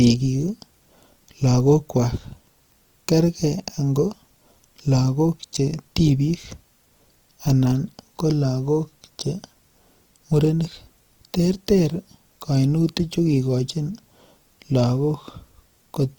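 From start to end the speech carries Opus compression, the likely cause of a grainy, rough texture. The encoder keeps each band's energy but refills starved bands with folded or noisy content, so clean harmonics turn noisy and gritty. The damage is plainly audible and fits the music mode at around 24 kbps. A spectrogram shows content reaching about 20.4 kHz with few holes, but harmonic lines dissolve into speckled noise.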